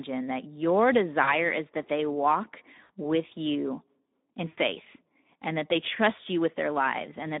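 Right from the start the whole thing carries Speex codec damage, and it's plainly audible: the speech has that grainy, hoarse edge you get when a CELP coder is short of bits for the excitation. The coarseness fits a bitrate around 11 kbps. The band sits on a phone-style line from 200 Hz to 3.7 kHz, so it's thin and boxy with no real top end.

On top of that there are three spots of VoIP packet loss concealed by the speech codec. The first runs 1.23 to 1.35 s, right after "that your" and before "is that they walk", with about 40 ms missing. The second is 2.83 to 2.90 s, after "is that they walk" and ahead of "with you in", with 60 ms gone. The third and longest is 4.47 to 4.59 s, after "walk with you in", covering 100 ms. Those gaps fit runs of two, three and five 20 ms frames. In each one the decoder keeps repeating its last pitch and filter while ramping the gain down, so the sound smears into a buzzy tone or coloured noise that fades. 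Because each frame builds on the one before, the speech stays a bit weak and off for a short while after real packets resume.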